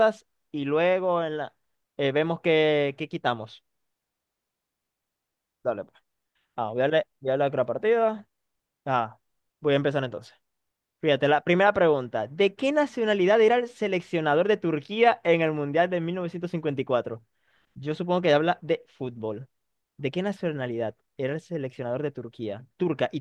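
No faults can be heard anywhere in the recording.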